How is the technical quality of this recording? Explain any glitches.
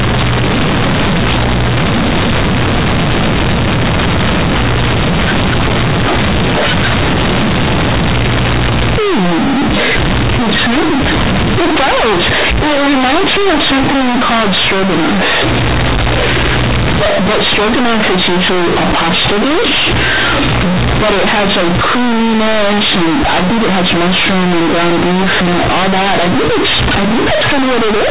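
The technical quality is poor throughout. The speech was coded as G.711 A-law telephone audio, correctly band-limited below 4 kHz, but it was then played back as companded audio read as linear. Across the whole recording, those logarithmic A-law bytes are treated as plain 8-bit samples without expansion, so quiet detail swings as hard as loud peaks, giving loud, buzzy distortion and heavy noise in pauses.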